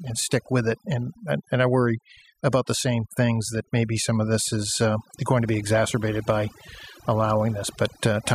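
Throughout the speech, overdone noise removal leaves near-silent gaps with twinkling specks, unlike a noise gate, which mutes whole passages rather than single bands.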